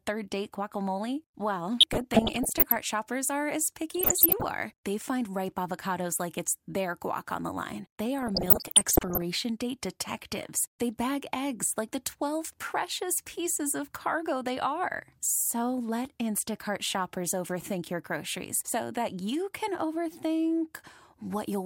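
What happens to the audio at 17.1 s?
Nothing goes wrong at 17.1 s; the speech carries on intact through that moment.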